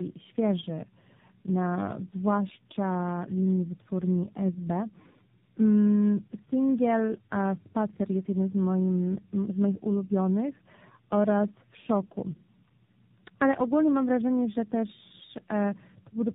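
Tandem speech coding runs through the whole clip: the speech sounds decoded and re-encoded across about three speech codecs in a row, and nothing remains above 3.8 kHz. Unlike a single low-bitrate codec, the roughness, muffling and warble compound, each stage degrading the previous one's output.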